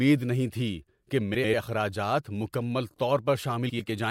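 Frames out of order at 1.34 to 1.54 s and 3.69 to 3.89 s: two adjacent 96 ms blocks play swapped, a garbled flutter, showing three spectrogram seams.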